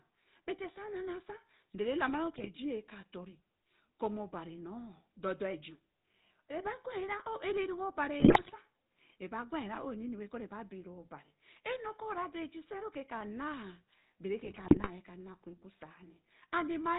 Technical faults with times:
0.00-16.98 GSM full-rate codec
2.36-2.50 GSM bit errors
8.20-8.54 GSM bit errors
14.44-14.90 GSM bit errors

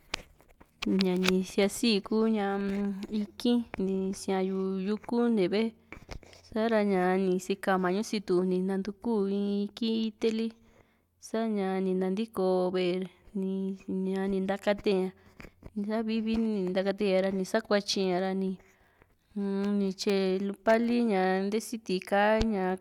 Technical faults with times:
none

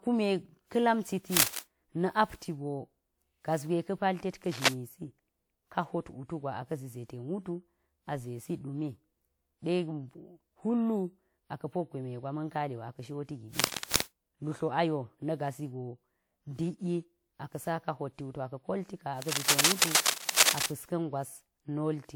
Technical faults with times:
0.00-22.15 generation loss
1.36-1.59 cable scratch noise
4.45-4.69 cable scratch noise
13.59-14.02 cable scratch noise
19.22-20.67 cable scratch noise

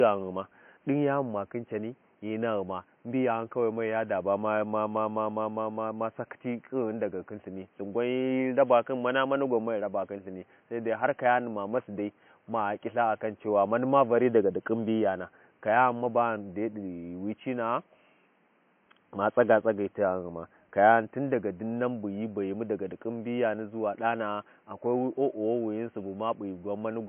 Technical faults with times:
0.00-27.09 low-bitrate audio saved at a high bitrate

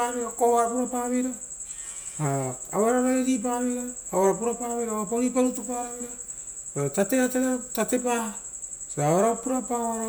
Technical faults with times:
none

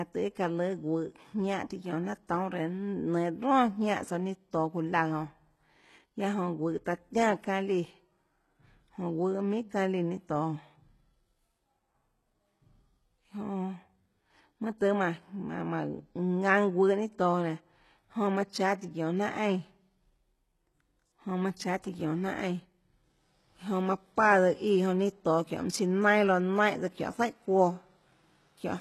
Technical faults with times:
0.00-28.81 HE-AAC compression

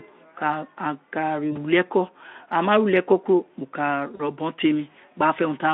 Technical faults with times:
1.51-1.58 VoIP packet loss concealed by the speech codec
4.15-4.23 VoIP packet loss concealed by the speech codec

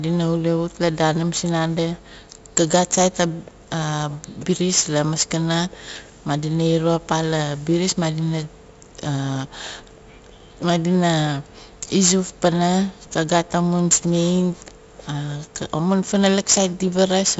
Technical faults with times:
0.00-17.40 4-bit ADPCM compression

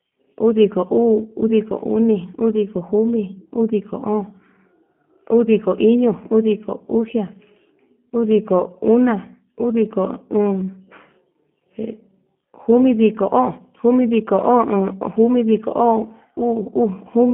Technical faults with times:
0.00-17.33 G.729 codec

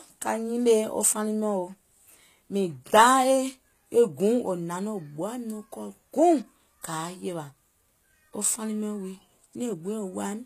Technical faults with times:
0.00-10.46 HE-AAC compression

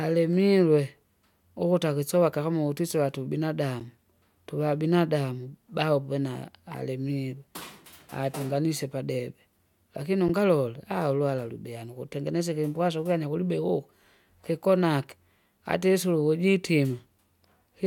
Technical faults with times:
3.80 block of digital silence
10.28 block of digital silence

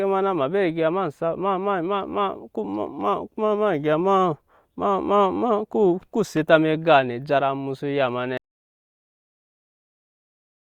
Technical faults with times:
8.38-10.78 audio dropout to silence

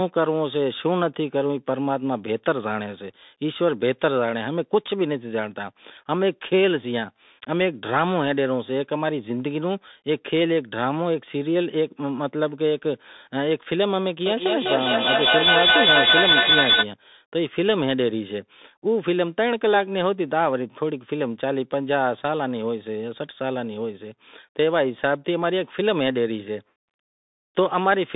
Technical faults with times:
0.00-28.15 Bluetooth CVSD headset codec
14.26-16.89 feedback howl

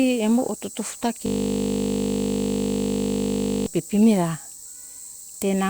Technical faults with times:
1.26-3.67 system hang loop

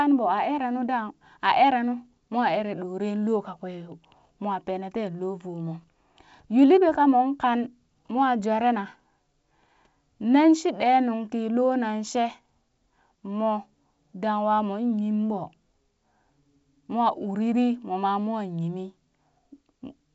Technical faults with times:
none

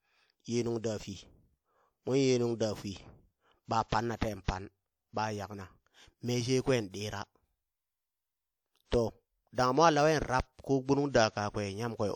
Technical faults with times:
4.44-4.48 pre-echo

